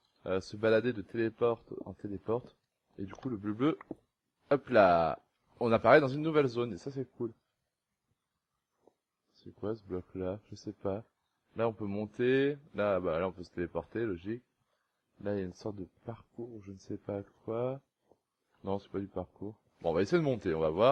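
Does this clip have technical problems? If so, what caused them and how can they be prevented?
No, there's nothing technically wrong to flag here, so there's nothing to trace back or guard against next time.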